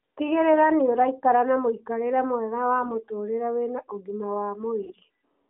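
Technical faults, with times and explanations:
2.82–3.03 s and 4.83–4.94 s, AMR bit errors: Just after "na mũikarĩre mwega wa" and again after "wĩna ũgima wa", the speech turns hoarse, scratchy and gargly while keeping roughly its pitch and loudness. A few percent of the less protected bits in each AMR-NB frame arrived corrupted. The frames still passed the check on their key bits, so the decoder used them. The misplaced excitation pulses and slightly wrong gain, pitch and spectral values roughen the sound for about 0.2 s and then 0.1 s.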